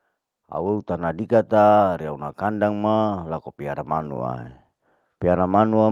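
From 0.34 s to 4.5 s the level climbs steadily by about 6 dB. This is automatic gain rising: the gain control judged the input too quiet and kept turning it up over roughly four seconds. What sets it apart from a talker moving closer to the microphone is that the background noise swells in step with the speech. The tone also stays the same, without the added low-end warmth that proximity brings.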